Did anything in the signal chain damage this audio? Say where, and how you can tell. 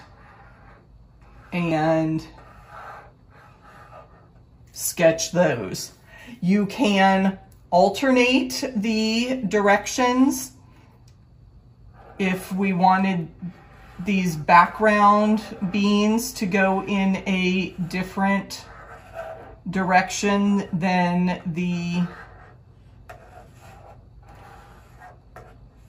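Yes. At 1.71 s compressed frames were skipped at the codec or storage stage: the audio jumps ahead by about 70 ms, roughly two frames of 32 ms each. Frames missing from the file or rejected by the decoder as damaged leave an abrupt join where the sound resumes.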